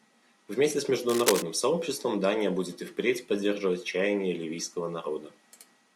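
Cable scratch noise runs from 1.09 to 1.43 s as a dense, uneven rustling, only slightly quieter than the speech. It is likely a worn cable or connector being moved. Its contact resistance flutters, spraying ragged bursts of noise into the signal.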